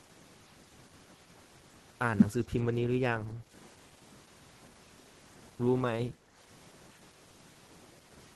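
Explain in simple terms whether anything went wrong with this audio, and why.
The first couple of seconds of speech, from the start to 1.94 s, sound rushed, racing along at nearly twice the normal pace while the pitch stays where it should. This is a time-stretched section. Software likely squeezed that stretch to fit a shorter length, keeping the pitch natural by cutting out tiny slices of sound and joining what was left. Those missing slices are what make it sound hurried.

Twice, at 3.33 to 3.52 s and again at 6.14 to 6.35 s, the room sound behind the speech suddenly sinks for about a fifth of a second, then comes back. This is background gated by the echo canceller. While something was playing through the loudspeaker, the echo canceller turned the microphone down sharply to keep that sound from being picked up again, and the room sound briefly went with it.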